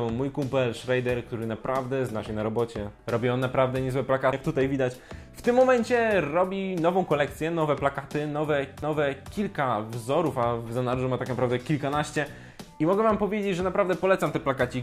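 At 4.32 s and again at 8.82 s there's a CD skip. The laser jumps tracks, so you get a few milliseconds of mute, a tick, and the sound lurching to another spot.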